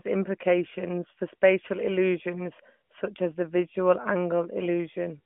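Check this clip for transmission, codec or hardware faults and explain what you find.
Nothing stood out on listening to this speech as a transmission, codec or hardware problem.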